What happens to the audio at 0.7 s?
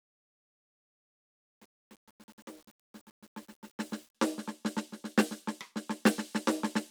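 Truncation distortion on a fade runs from 0 to 4.15 s. The undithered fade steps the quiet music coarsely, pointing to 8-bit resolution. It sounds gritty.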